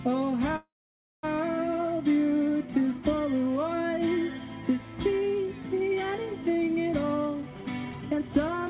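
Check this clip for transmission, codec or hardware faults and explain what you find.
Two faults stand out, both on the receiving side of a call path that already has the narrowband G.711 sound, with nothing above 4 kHz.

From 0.56 to 1.25 s there's a call audio freeze, likely from packets stalling in transit so the jitter buffer ran dry. The receiver stretches the last bit of sound briefly, then goes silent for about 560 ms before the audio picks up exactly where it left off. That's a pause inserted, with nothing lost.

From 6.96 to 8.48 s you get a jitter buffer speed-up. The buffer had built up more audio than it wanted, so the receiver kept snipping out tiny pitch-period slices, roughly half a second in total. Playback runs at about 135% speed with pitch unchanged, so it sounds noticeably rushed.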